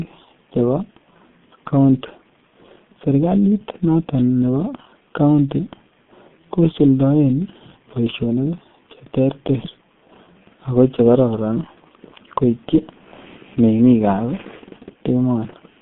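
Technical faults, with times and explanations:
Throughout, G.723.1 codec: the speech sounds muffled, hoarse and boxy, with consonants smeared together. The band is cut to roughly 150 Hz to 3.5 kHz, so there is no sibilant sparkle or chest weight. The heavy damage fits a very low bitrate near 6 kbit/s: the codec models the voice in 30 ms frames and updates that model slowly, so quick articulation is blurred.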